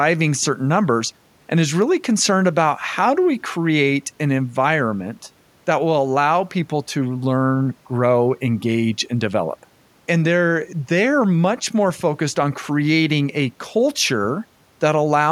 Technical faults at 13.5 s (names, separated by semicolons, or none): none